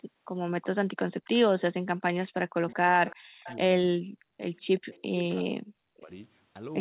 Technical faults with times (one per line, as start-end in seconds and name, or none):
0.61-0.65 echo leak
1.02-1.61 echo leak
1.88-3.84 speech suppressed in double talk
2.68-2.74 echo leak
3.08-3.58 echo leak
4.12-4.39 background gated by the echo canceller
4.56-5.44 echo leak
5.04-6.10 speech suppressed in double talk